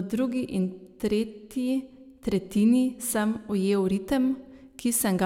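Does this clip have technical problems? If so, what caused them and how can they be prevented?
No, there are no technical problems to point to in this clip. With nothing going wrong, there is nothing here that needs preventing.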